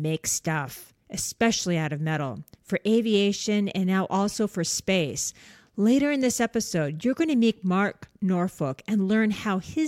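Speech recording with no audible technical fault: no dropouts, clipping, glitches, noise bursts or timing errors anywhere in the clip.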